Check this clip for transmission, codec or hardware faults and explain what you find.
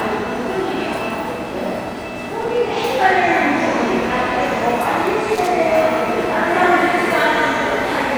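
Two short bursts of loose connector crackle, at 2.41 to 2.70 s and 5.35 to 5.47 s: irregular scratchy crackling where a worn or dirty contact repeatedly breaks and remakes, chopping the signal.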